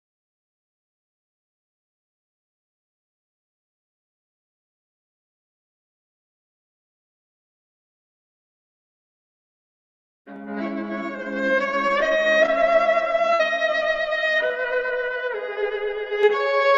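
At 12.46 s there's a short concealed packet loss: about 20 ms never arrived, so the decoder stretched the preceding sound to cover it, leaving a quick smear. At 13.34 to 13.41 s comes a burst of packet loss, roughly 60 ms gone. The receiver carried the last sound on for about 56 ms, fading it as a held buzz or hiss, then skipped ahead. Another short concealed loss hits at 14.47 s, again about 20 ms patched over with a brief wobble.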